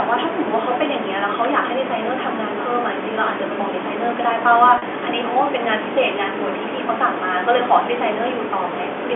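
Speech over a narrow telephone-band line, with a brief packet loss with pitch repetition at 4.78 to 4.82 s. The 40 ms gap, consistent with two 20 ms packets, is filled by a repeated pitch period that sounds like a short buzzy hold.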